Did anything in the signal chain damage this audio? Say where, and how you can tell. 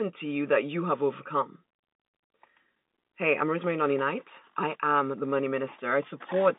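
No, nothing in this speech stood out on listening as damage from any stage of the chain.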